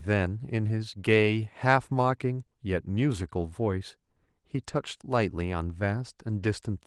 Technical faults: none

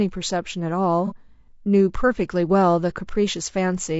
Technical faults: low-delay AAC compression; AAC frame loss with concealment

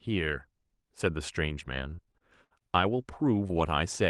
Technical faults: repeated packet loss (robotic sound); short concealed packet loss; lost packet rebuilt from error correction

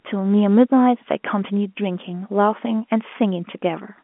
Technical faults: none

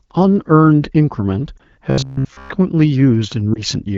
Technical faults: lost AMR speech frames; robotic sound from repeated short buffers

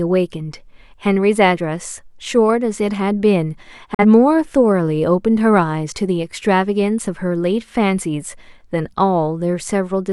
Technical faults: digital broadcast dropout

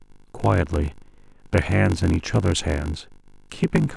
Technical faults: block size mismatch (padded)

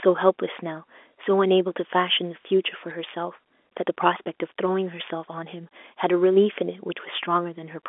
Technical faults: bit errors on a digital phone line

